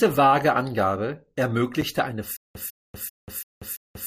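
It's a speech clip with two kinds of trouble. First, there's a gap between stream segments at 1.81 s: a tiny, hard-edged hole of about 7 ms where the timestamps of two adjacent segments don't quite meet and the player pads the difference with silence. A second, longer one of 55 ms opens at 2.82 s and runs to 2.87 s. Both land on what sounds like a 1-second segment grid, and nothing is actually missing; the sound just pauses. Then from 2.37 s to the very end there's a stutter with silent gaps: the same 150 ms fragment keeps coming back, five times over, each repeat followed by about 187 ms of dead digital silence, so it pulses every 336 ms or so. The likely cause is the stream stalling, with the player replaying its last buffered chunk on each retry before running dry, so whatever should have followed 2.37 s is gone.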